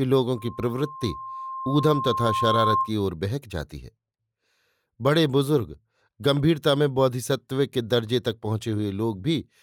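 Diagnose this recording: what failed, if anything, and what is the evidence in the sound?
The acoustic path between loudspeaker and microphone closed into a loop, causing loudspeaker feedback squeal: from 0.36 s a single tone near 1.1 kHz swells over about two seconds until it is roughly as loud as the speech, then stops at 2.93 s when the loop breaks.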